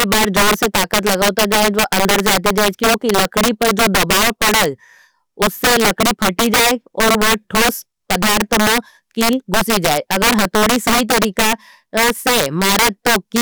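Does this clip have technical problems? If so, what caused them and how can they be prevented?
Yes. Integer overflow runs through the whole speech clip. The gain drove peaks about 9 dB past full scale. They wrapped to the opposite sign instead of being limited. A small share of samples flip this way, giving violent cracks far sharper than clipping. Use saturating arithmetic and leave gain headroom.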